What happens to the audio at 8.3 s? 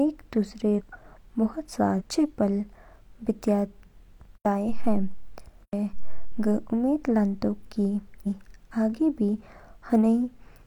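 Compressed frames are skipped at 8.22 to 8.27 s: several whole frames are missing or refused by the decoder, so the speech jumps ahead by about 0.4 s, which fits a frame length of about 46 ms. The join is heard as a sudden jump in the speech.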